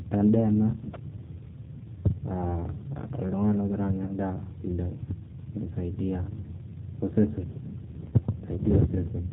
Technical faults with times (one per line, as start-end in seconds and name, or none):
0.00-9.32 G.729 codec
4.06-4.12 VoIP packet loss concealed by the speech codec
8.09-8.15 VoIP packet loss concealed by the speech codec